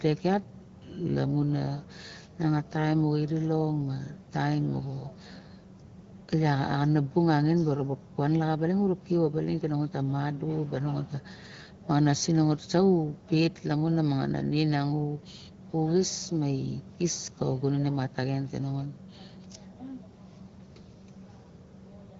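Nothing goes wrong anywhere in this speech recording, and the AMR wideband (HD Voice) coding at 15.85 kbit/s is just doing its usual job, with the sound topping out at 7 kHz.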